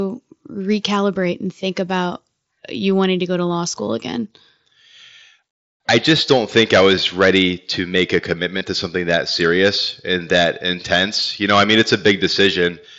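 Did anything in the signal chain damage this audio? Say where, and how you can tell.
Yes: concealed Bluetooth headset packet loss on the headset-to-phone radio link. Patches at 3.46 s and 6.96 s each fit one lost 7.5 ms packet, and 8.58 to 8.61 s fits about three in a row. The receiver refilled each gap with a repeated recent waveform stretch.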